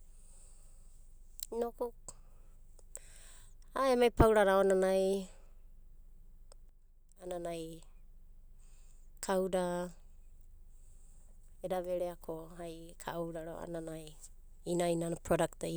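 From 6.69 to 7.27 s, one channel drops out, likely because one side of the stereo feed briefly lost its signal before the two channels were summed to mono. With only one side contributing for roughly 0.57 s, the sound shared by both channels falls abruptly by about 6 dB, and anything carried only on the missing side vanishes. The speech audibly dips in loudness for that half-second, then snaps back to full level.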